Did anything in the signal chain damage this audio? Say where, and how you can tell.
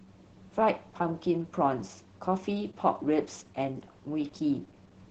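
Yes, at the codec stage, throughout the speech. Opus voice compression is audible. Nothing reaches above about 8 kHz, and the voice sounds muffled, hoarse and slightly robotic. The coarse excitation coding fits SILK mode at roughly 10 kbps.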